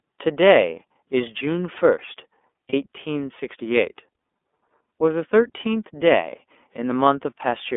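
A speech recording carried over a narrowband iLBC codec link for its full length. The audible band is confined to roughly 250 Hz to 3.5 kHz, so the voice lacks both low-end body and upper sibilance. As is typical of this low-bitrate codec, the voice has a plainly audible rough, slightly synthetic texture. The 30 ms framing this implies fits iLBC's 13.33 kbps mode. The second fault is lost iLBC frames, heard between 2.69 and 2.74 s. For that short stretch the decoder filled the gap by repeating the last pitch period blended with noise, producing a brief held, faintly buzzy vowel-like sound in place of the real signal. The gap's length fits a single dropped 30 ms frame. Since iLBC frames do not depend on their predecessors, normal decoding resumes immediately afterward with no lingering smear.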